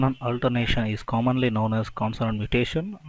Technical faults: none

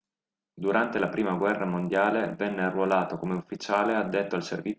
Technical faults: resampler restarted on every block

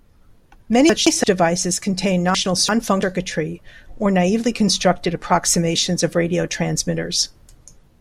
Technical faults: frames out of order

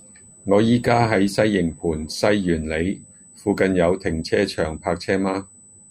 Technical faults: USB whine

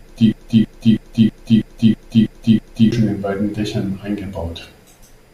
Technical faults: broken-record loop

